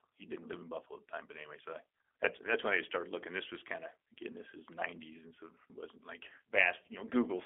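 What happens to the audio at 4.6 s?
At 4.6 s the speech is still passing through the G.729 codec, as it does for the whole clip, at a rate that fits 8 kbit/s. The codec rebuilds each 10 ms frame from a vocal tract filter, pitch predictor and sparse pulses, within a 300 Hz to 3.4 kHz band, so the speech sounds narrow, rough and plainly synthetic.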